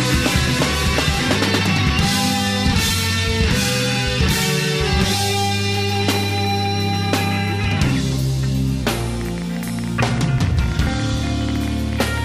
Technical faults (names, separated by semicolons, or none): section at the wrong speed; train of clicks